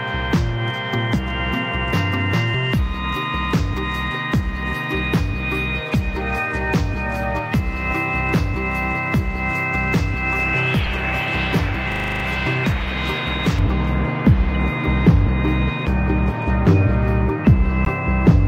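Brief glitches, with energy thrown to the wrong frequencies, mark a corrupt frame decoded at 5.92–5.94 s and again at 10.85 s. Damaged compressed frames were played anyway.

From 11.92 to 12.24 s a 40 ms piece repeats exactly eight times at 25 Hz. This is a system hang loop: playback kept cycling one buffer while the system froze.

From 13.59 s to the end the sound turns dull and muffled, about 11 dB down at 10 kHz relative to 1 kHz. De-emphasis was applied wrongly, cutting treble that had never been boosted or cutting it a second time.

More corrupt frame decoded glitches land inside that stretch, at 14.55 s and at 17.85–17.87 s.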